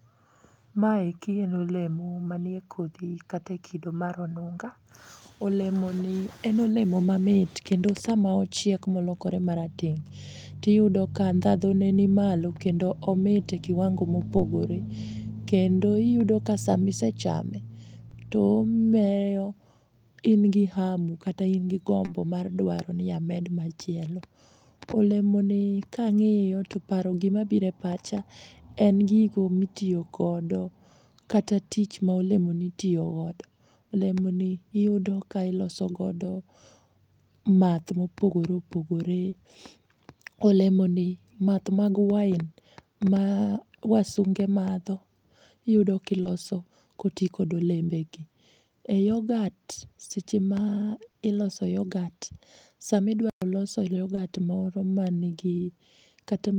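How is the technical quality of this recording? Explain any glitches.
The speech is marred by two kinds of glitch: repeated short concealed packet loss and one brief playback stall.

Short concealed packet loss occurs at 14.37, 18.09, 22.05, 39.29, 46.23, 51.11 and 54.15 s, the first just after "kendo omit e kiwango" and the sixth between "yogat seche ma" and "iloso yogat". Each time about 20 ms of audio failed to arrive and the decoder extrapolated from the preceding sound before blending back, leaving a short smear or wobble.

A playback stall runs from 53.30 to 53.42 s. The sound cuts to silence for 120 ms and then resumes. The likely cause is the player running short of data or its output thread being blocked.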